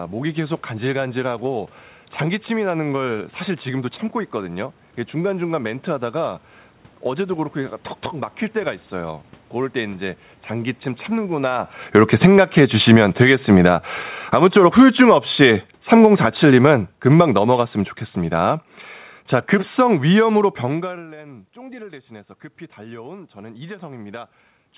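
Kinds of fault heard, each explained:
automatic gain falling: The gain control decided the input was too hot and wound itself down by about 16 dB, slowly, from 11.23 to 18.66 s, starting just before the talker shifts around 11.5 s. So the voice starts loud, then sags, with the room noise sinking right along with it.
automatic gain rising: Here it's the reverse. Around 20.5 s the talker moves and the input drops by about 22 dB, so from 20.91 s to the end the gain control creeps back up, and voice and background noise swell together over a few seconds.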